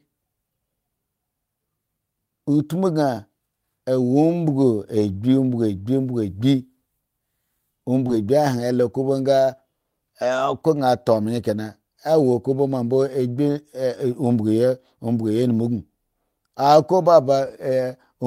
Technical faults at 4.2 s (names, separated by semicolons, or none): none